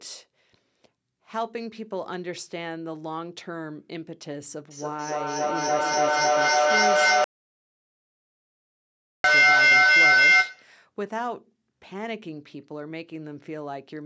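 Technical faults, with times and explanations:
4.71 to 10.79 s, feedback howl: a piercing tone near 2 kHz swells until it stands about 15 dB above the speech, pulsing roughly every third of a second. Two devices sharing a room on the same call form a loop from microphone to loudspeaker and back that gains level on each pass. Instead of dying away, the repeats reinforce, narrowing onto the frequency the loop favours, and the pulse rate follows the loop's round-trip delay.
7.24 to 9.24 s, playback stall: the output drops to silence for 2 s in the middle of the howl, then resumes. A gap of this length points to the player starving for data or having its audio thread blocked. The likely cause is that the output had nothing to play until the buffer refilled, so the sound simply stops and then carries on once data arrives again.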